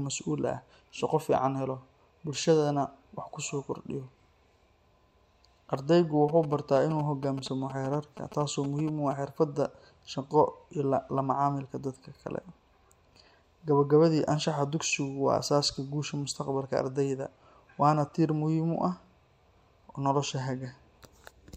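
From about 6.29 to 9.13 s you get GSM signalling bursts: a nearby 2G phone handshaking with its network, its radio bursts rectified by the audio circuitry. It's that galloping dit-dit-dit of short 217 Hz buzzes, sitting roughly 15 dB under the speech.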